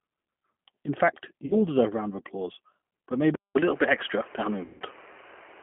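The whole clip runs through the G.729 codec at 8 kbit/s, squeezed into roughly 150 Hz to 3.5 kHz, so the speech sounds boxy, slightly rough and synthetic. At 1.46 to 1.57 s, just before "all deserve a", there's VoIP packet loss concealed by the speech codec. About 40 ms went missing, which fits two lost packets, and the decoder smears it into a brief stretch. From 3.35 s, after "of applause but", the input has likely switched to a poorer device. There's a 200 ms gap, then duller sound cut off above 3.3 kHz, a level shift of a few dB, and a faint new noise floor well under the speech. A second, longer dropout hits at 4.64 to 4.83 s. About 160 ms is lost, which suggests a run of around eight packets, and it comes out as a fading smear that stays weak for a moment as the speech recovers.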